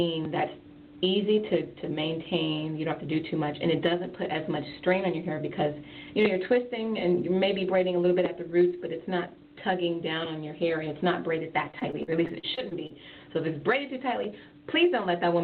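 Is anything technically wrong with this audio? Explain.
Yes. From 11.71 to 12.92 s the sound turns choppy and robotic, with repeated packet loss leaving gaps up to 46 ms, each patched by extending the previous sound.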